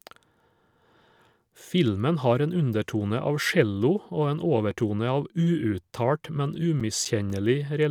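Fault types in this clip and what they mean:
CD scratch ticks: A disc blemish defeats error correction once per revolution. Four regular ticks, the longest about 7 ms, hit the speech from 6.55 to 7.30 s.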